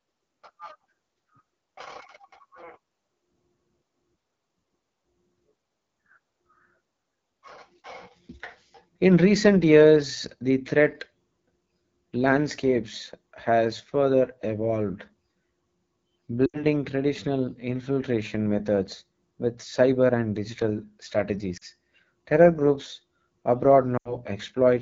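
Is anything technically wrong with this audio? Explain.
Yes. Two faults can be heard.

The whole clip passes through the AMR wideband (HD Voice) codec. The speech has a rough, raspy grain that is plainly audible. That texture fits the low 8.85 kbit/s mode. AMR-WB rebuilds speech below 6.4 kHz from pulses driving a vocal tract model. It then fills 6.4 to 7 kHz with shaped noise. At this rate the pulse coding is too coarse, so the rasp remains.

There are lost AMR speech frames at three points: 16.46 to 16.65 s, 21.57 to 21.65 s, and 23.98 to 24.16 s. The first comes just before "traditional infiltration methods with". Radio errors corrupted these frames. The decoder filled the gaps by repeating its last good pitch and vocal tract settings at falling gain. The sound briefly smears and fades. It then returns weak and rough. The first and last gaps fit about four frames. The middle one fits about two.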